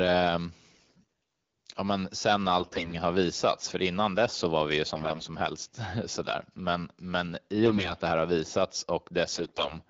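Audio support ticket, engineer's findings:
AMR bit errors, five short bursts: 0.71–1.11 s; 2.59–2.94 s (after "ja men sen", before "har visats för innan"); 4.93–5.26 s (after "så var vi ju"); 7.66–7.94 s; 9.31–9.74 s (after "det här har visats").

Symptom: speech turns hoarse and gargly, with pitch and level roughly held.

Mechanism: on a weak link, roughly one in ten to one in five of the less-protected frame bits flip while the checksum over the core bits still passes. Excitation pulses land in the wrong places, and fine gain, pitch and spectral values are corrupted.

Wideband path: clear. Sound quality fits AMR-WB at 12.65 kbit/s, with light coding roughness.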